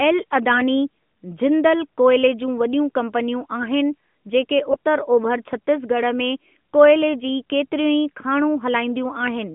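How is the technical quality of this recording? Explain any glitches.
The speech runs through a narrowband mobile line, with nothing above 3.4 kHz on a spectrogram and the light buzz of AMR-NB, and has one short glitch. From 4.72 to 4.76 s, between "वॾियूं कंपनियूं आहिनि जेके" and "उतर ओभर छत्तीसगढ़ में", AMR bit errors occur. Flipped low-priority bits, at a rate of about 7 percent and consistent with roughly three damaged frames, misplace excitation pulses, causing a hoarse, gargly rasp. The spectrogram shows smeared, noisy harmonics there, while the waveform's level holds.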